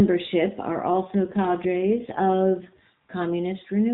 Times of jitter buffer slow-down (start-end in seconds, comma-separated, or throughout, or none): none